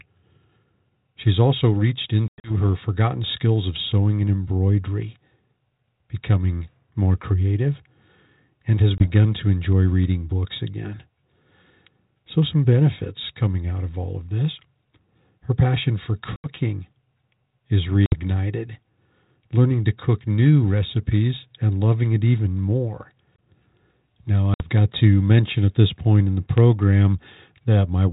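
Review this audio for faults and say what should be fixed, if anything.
Packet loss on an ADPCM call breaks this speech five times: 2.28 to 2.51 s, 8.98 to 9.07 s, 16.36 to 16.48 s, 18.06 to 18.17 s, and 24.54 to 24.69 s. Each is a hard-edged silent hole. The first loses 140 ms in pieces across 160 ms, with one 100 ms run. The rest lose 20, 80, 60 and 60 ms. When the audio returns, the decoder's predictor and step size no longer match the sender's. The speech comes back slightly distorted before it settles. This happens on a narrowband G.726 link that sounds like 32 kbit/s. To prevent it, add a jitter buffer and packet-loss concealment that resets the ADPCM decoder state cleanly after each gap.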